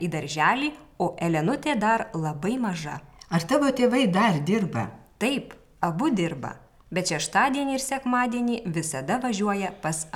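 No technical faults can be heard in this audio.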